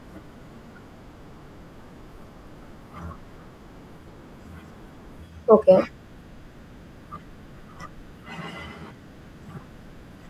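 No technical faults can be heard anywhere in the speech. There is nothing here to place in time or describe.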